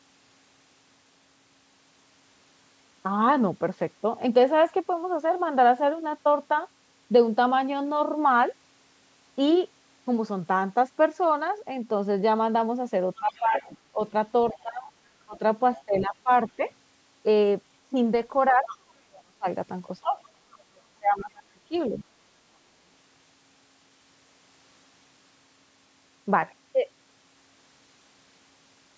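From 13.18 to 14.0 s both ends of the call appear to be talking at once, and the echo canceller has likely failed to tell the local talker apart from loudspeaker echo. That produces speech suppressed in double talk: the voice dips by roughly 15 dB in pieces totalling about half a second. Overlapping it, from 13.3 to 14.62 s, comes the other side's voice leaking through, likely residual echo the canceller left in the microphone signal, sitting about 20 dB under the speech as a faint second voice. The suppression returns from 14.53 to 16.61 s, cutting roughly 20 dB for about 0.7 s in scattered chunks. From 18.5 to 19.46 s it bites hardest, around 35 dB, so the voice nearly vanishes for about 0.7 s. Inside that gap a brief scrap of leaked far-end voice appears at 18.67 to 18.76 s, about 15 dB below the speech. From 20.03 to 21.95 s the talker is pushed down by around 30 dB for about 1.5 s in total. 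The passage ends with a very faint trace of the other side, roughly 35 dB down, from 21.77 to 22.04 s. The call's microphone processing limits the band to 8 kHz.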